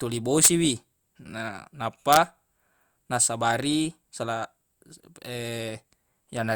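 Integer overflow cracks the speech at 0.45 to 0.48 s, overdriven by about 4 dB, and again at 2.13 to 2.17 s: peaks wrap to the opposite sign, sounding far harsher than flat-topped clipping.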